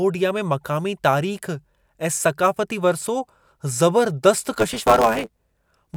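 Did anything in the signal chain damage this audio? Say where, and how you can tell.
Yes. A block size mismatch (truncated) appears from 4.52 s to the end of the speech, at the driver or buffer stage. One stage writes blocks longer than the next reads, and each block's tail is discarded. That gives a buzz at 109 Hz and delivery about 1.09 times faster at roughly normal pitch.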